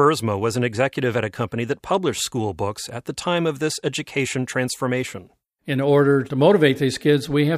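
No technical faults can be heard in this recording.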